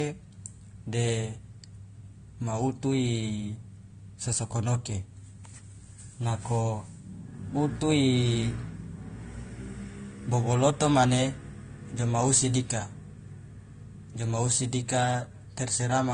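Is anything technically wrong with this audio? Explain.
Yes. The speech carries a layered compression fault throughout, most likely transcoding between lossy codecs. The sound points to an AAC encode at around 32 kbit/s, later re-encoded with Opus at around 48 kbit/s. Nothing is present above 9.7 kHz, the lowest cut-off in the chain, which survived to the end. The second encoder spent bits copying the earlier damage and added its own. Both sets of artefacts are audible together over a dull top end.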